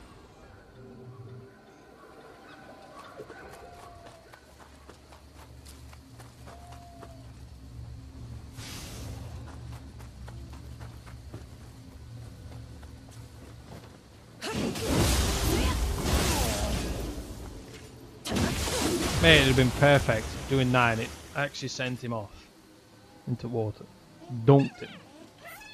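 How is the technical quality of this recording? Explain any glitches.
No glitches or technical faults are audible anywhere here.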